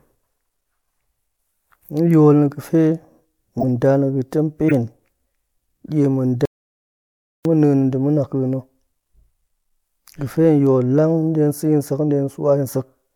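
At 3.59 to 3.63 s, just before "nda na̱ ga̱ga̱ tem", a corrupt frame was decoded: damaged bits in the compressed stream were played rather than concealed, so misread gains and codes scattered energy into the wrong frequencies for about a couple of frames. It comes through as a sharp, loud blip peaking around -5 dBFS. A second, shorter one follows at 4.68 to 4.72 s, right after "nda na̱ ga̱ga̱ tem", spanning roughly a single frame.

At 6.45 s, after "die ma̱", an audio dropout to silence begins and lasts about 1.0 s, until 7.45 s. The signal falls to silence with no room tone underneath, then the speech resumes mid-flow, and whatever was said in that second is lost. The abrupt cut to true silence, rather than a fade or a drop in level, is what a likely loss of the input feed would produce while the recorder kept writing silence.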